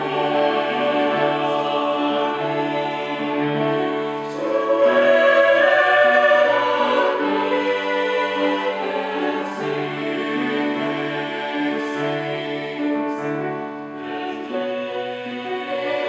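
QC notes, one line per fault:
No audible faults detected.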